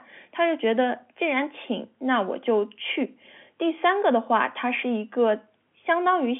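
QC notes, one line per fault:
No faults heard anywhere in the speech.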